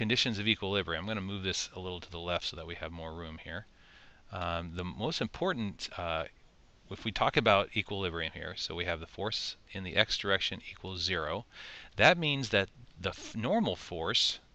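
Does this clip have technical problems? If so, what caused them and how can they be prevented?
No, this clip has no technical problems, so there is nothing to prevent.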